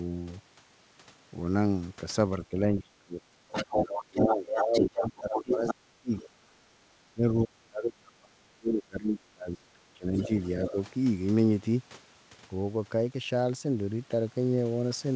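Speech suppressed in double talk, 2.38 to 3.19 s: the voice dips by about 25 dB for most of that stretch, likely because the echo canceller mistook overlapping talk for loudspeaker echo and turned both down.

Other side's voice leaking through, 3.51 to 5.74 s: a second voice comes through at roughly the same level as the talker, likely residual loudspeaker echo the canceller failed to remove from the microphone.

Speech suppressed in double talk again, 3.66 to 6.43 s, overlapping that leak: the talker's level drops by about 25 dB in pieces across roughly two seconds, likely the same canceller confusion.

Speech suppressed in double talk, 7.14 to 10.77 s: the deepest cuts reach about 30 dB, covering around three seconds. This is likely the canceller clamping down while both sides spoke.

Other side's voice leaking through, 10.17 to 10.71 s: a fainter second voice, about 15 dB below the talker, slips through, likely uncancelled echo.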